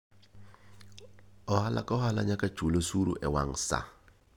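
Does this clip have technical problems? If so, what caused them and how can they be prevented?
No, nothing here sounds wrong technically, so there's nothing to trace back or guard against this time.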